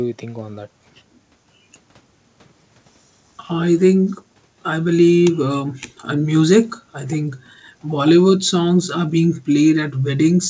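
Nothing goes wrong anywhere in this bit of speech, and the only thing worth a mention is that the audio carries nothing above 8 kHz, which fits a wideband call path like G.722 at 64 kbps doing just what it's meant to.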